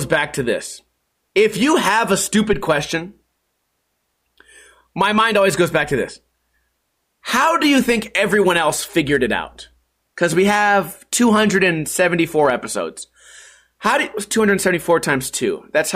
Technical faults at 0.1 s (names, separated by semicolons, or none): none